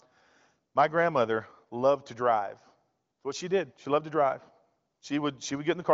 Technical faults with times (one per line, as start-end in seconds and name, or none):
none